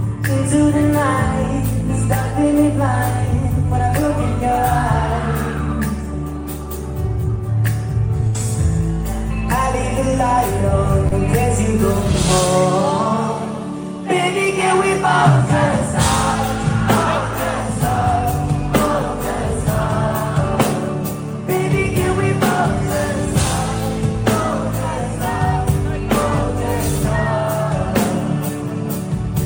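At 8.27 to 8.37 s there is a burst of packet loss. Several consecutive packets failed to arrive in time, so about 80 ms of audio never reached the decoder. The receiver covered roughly 70 ms of that hole by extending the last sound it had and fading it down. What you hear is a held, dimming continuation of the preceding sound, and then the audio picks up further along, with the missing stretch skipped entirely.

At 11.07 to 11.15 s a short concealed packet loss follows. About 40 ms of data went missing, and the decoder patched it with about 40 ms of synthesized continuation built from the sound just before the gap, then cross-faded back into the real signal. Because the patch is so brief, it comes across as a quick smear or wobble rather than an audible dropout. A short transient falling inside that window would be swallowed by the fill.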